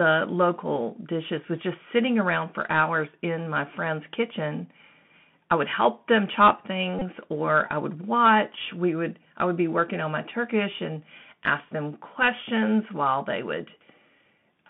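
From the start, the speech runs through a Bluetooth CVSD headset codec: a 64 kbps one-bit delta stream, band squeezed to roughly 150 Hz to 3.5 kHz, with plainly audible scratchiness and granular hiss. At 6.99 to 7.03 s there's a Bluetooth headset packet repeat: about 22.5 ms of lost audio, which fits six packets, each refilled with the previous packet's bits, giving a short buzzy blip near 267 Hz.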